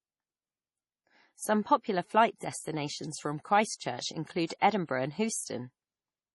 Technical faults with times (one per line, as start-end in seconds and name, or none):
0.00-6.35 MP3 compression
3.75-3.81 pre-echo